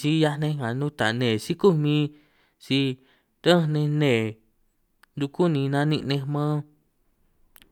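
Speech clip with compressed frames skipped at 3.42 s. About a tenth of a second vanishes, one 92.9 ms frame. The audio jumps ahead at the join.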